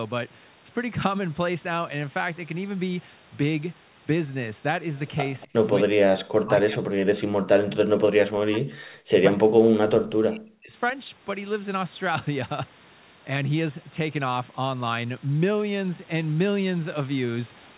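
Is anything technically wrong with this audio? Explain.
Yes. Two related faults appear between about 5.4 and 10.7 s.

Echo leak, 5.40 to 5.47 s: a faint delayed copy of the far side's speech comes through, lagging by about 248 ms and sitting about 25 dB below the main talker. The likely cause is a loudspeaker at one end whose echo canceller left some of the microphone pickup in place, so a short scrap of returned speech slips into the signal.

Speech suppressed in double talk, at 5.46 to 5.54 s, 5.83 to 6.12 s and 6.39 to 10.73 s: the talker's level drops by about 20 dB in the first, brief dip, then by as much as about 40 dB in the next two. The first lasts roughly 70 ms, the second roughly 200 ms, and the last stretch loses around 4 seconds in total. Both sides were likely talking at once, so the echo canceller could not tell local speech from echo and pulled everything down. The result is speech that sinks and drops out in pieces.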